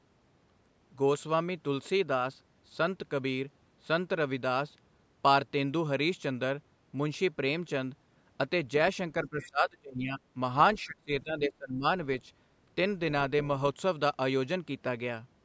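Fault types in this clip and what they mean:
Speech suppressed in double talk: the talker's level sinks by roughly 20 to 25 dB from 9.24 to 10.36 s and 10.85 to 11.84 s, likely the echo canceller ducking both sides at once. The waveform envelope pinches there, and the spectrogram's upper bands thin or vanish.
Other side's voice leaking through: a brief scrap of a second voice, about 20 dB under the talker, appears at 9.41 to 9.46 s, likely loudspeaker echo the canceller missed. The spectrogram shows faint, separate harmonic traces overlaid, while the waveform barely changes.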